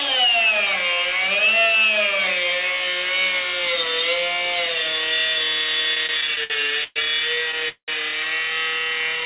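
Between 5.95 and 6.97 s there are repeated stalls (stutter). Audio packets kept reaching the receiver late, so its jitter buffer ran dry seven times in about one second. Each time, the receiver stretched the last bit of sound to cover the wait, up to 120 ms at the longest. Altogether about 248 ms was filled in, close to a quarter of that stretch. Nothing is lost, but the sound lurches and drags in short hitches.

At 7.69 s comes a call audio freeze lasting until 7.89 s. The likely cause is a delay in the network that left the jitter buffer empty. About 190 ms of gap is inserted. It begins as a brief continuation of the preceding sound, then falls to roughly 100 ms of silence before the audio resumes exactly where it halted. The rest of the clip now sits about 190 ms later than before.

From 8.71 to 9.22 s the jitter buffer slow-down is at work. With its reserve running short, the receiver rebuilt it by repeating tiny stretches of the waveform, one pitch period at a time. 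This added 56 ms and played that section at 90% speed without shifting its pitch. The sound is audibly drawn out. Throughout the clip, nothing is heard above 4 kHz, the limit of the narrowband call path.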